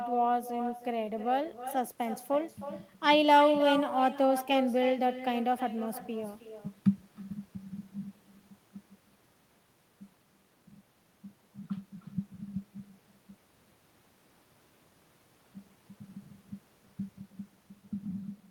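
Throughout, there is echo with no canceller: the far end plays the call over a loudspeaker, and its microphone sends the talker's speech back across the network. Every phrase is trailed, roughly a third of a second later, by a thinner copy about 11 dB down.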